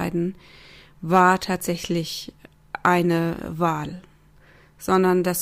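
A short speech recording with no audible technical faults anywhere in the signal.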